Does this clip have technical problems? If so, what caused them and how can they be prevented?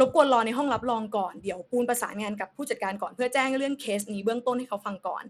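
Yes. Throughout the speech the treble thins and flickers in and out, with a gritty grain and aliasing layered over the sound. That pattern most likely comes from Bluetooth SBC compression. SBC splits the signal into a few wide sub-bands and shares out bits without a hearing model, so the weak top bands get starved and the rest is coarsely quantised. The damage is plainly audible and fits a low setting of about 96 kbps. Unlike the watery, swirling artefacts of perceptual codecs such as MP3 or AAC, this is a band-wise graininess with unstable highs. It also differs from a plain low-pass filter, where the treble is removed cleanly and stays gone. To prevent it, record over a wired connection or the device's own microphone, or use a Bluetooth link with a higher-quality codec.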